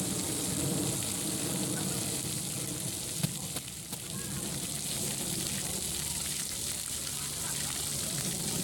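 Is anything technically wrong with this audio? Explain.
Yes. From 0.26 s to 8.21 s, a digital link is read by a device whose clock isn't locked to the sender's. These word clock ticks come from a drift of roughly 40 ppm, so a sample slips about every half second, giving around fifteen sharp ticks at that steady rate.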